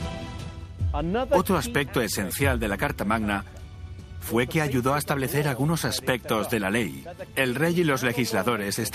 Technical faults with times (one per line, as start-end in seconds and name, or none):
none